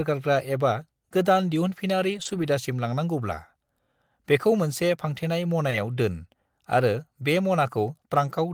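From about 2.13 to 2.47 s there's a lost packet rebuilt from error correction. Several separate packets went missing, and the decoder patched roughly 180 ms from the low-bitrate copies riding in the following packets, so there's no gap. The speech just turns rougher and grainier there.

At 5.69 s comes a short concealed packet loss, with 20 ms that never arrived filled in by extending the preceding sound, heard as a quick smear or wobble. It overlaps a second rebuilt-from-error-correction patch of about 20 ms at 5.71 s, adding a brief rough, noisy edge.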